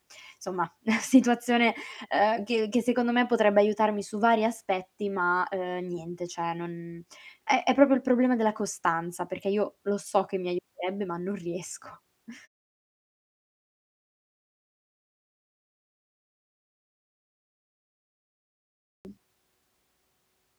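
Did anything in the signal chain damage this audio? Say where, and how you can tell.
Yes. At the playback stage, the output device went to sleep during a 6.3 s silence and had not woken or relocked when sound resumed. The result is a clipped start after a pause: from 18.65 s to 19.05 s, about 0.4 s of speech is swallowed, and the next words burst out of silence already underway, missing their opening sounds.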